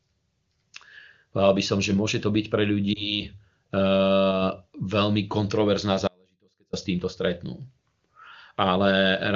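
Lost AMR speech frames at 2.94 to 3.22 s: a single speech frame, which fits about 20 ms of data, failed its check, and the AMR-WB decoder filled it by repeating the previous pitch and vocal tract settings at reduced gain. The result is a brief dip or warble before the speech recovers.

Audio dropout to a faint residue from 6.08 to 6.73 s: the speech cuts out abruptly for about 0.65 s, leaving only a faint trace roughly 35 dB below its normal level, then snaps back mid-flow. The likely cause is a loss of the wanted signal while the path after the break stayed live.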